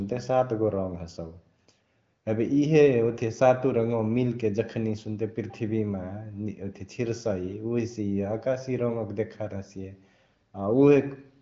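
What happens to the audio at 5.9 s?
At 5.9 s the audio is intact, with no dropout, click or distortion, and the speech carries the same 7 kHz wideband ceiling there.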